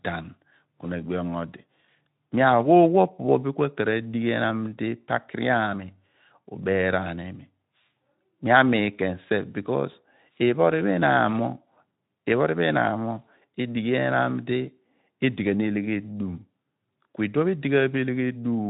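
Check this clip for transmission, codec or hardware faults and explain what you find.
No transmission, codec or hardware faults can be heard; the speech comes through a Speex-style narrowband path that is working as designed, with a light coding texture and nothing above about 3.8 kHz.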